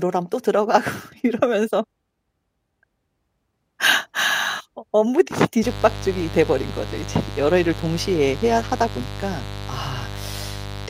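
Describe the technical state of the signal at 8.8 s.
At 8.8 s the speech sits over mains buzz, running from 5.61 s to the end. Sharp spikes leak in twice per 50 Hz cycle, spreading harmonics into the kilohertz range. The result is a steady, raspy buzz, about 10 dB below the speech.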